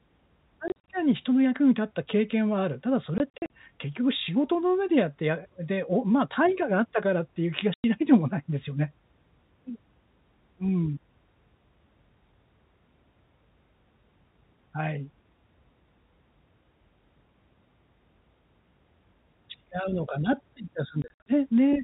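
Packet loss filled with silence chops the speech around 0.68–0.88 s, 3.18–3.5 s, 7.74–7.84 s and 21.02–21.26 s. Stretches of audio simply drop to dead silence in hard-edged holes, with the longest runs 40, 40, 100 and 60 ms long, which points to 20 ms packets. The band-limited G.711 telephone sound carries on underneath.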